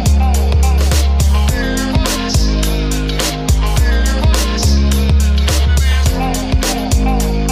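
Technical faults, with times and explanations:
No technical faults are heard in this clip.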